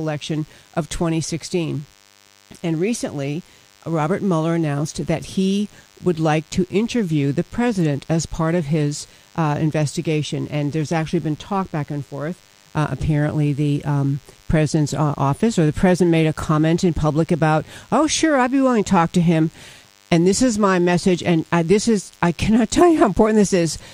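From start to finish, a DECT cordless phone buzz sits under the sound, roughly 35 dB below it. A nearby DECT handset or base transmits a brief radio burst every 10 ms, and the audio circuitry rectifies it into a 100 Hz pulse train. Unlike mains hum, which is a smoother tone at 50 or 60 Hz and its low harmonics, this is thin, rasping and rich in upper harmonics, because each burst is sharp-edged.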